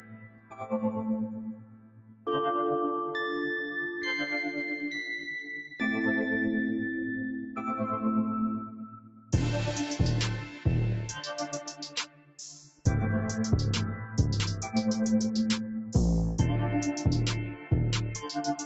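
Noise suppressor applied to music or sounds, throughout: a suppressor built for speech stays active and treats held tones, ambience and decays as noise. Its gain swings by around 10 dB, so attacks pass while sustained parts sink, and the sound pumps and thins.

Sound cut by the noise suppressor, at 0.0–0.57 s, 1.54–2.26 s, 8.69–9.33 s, 12.07–12.38 s and 12.6–12.85 s: here it pulls the sound down by about 12 dB (about 10 dB in the last), so sustained material drops away and tails are cut short.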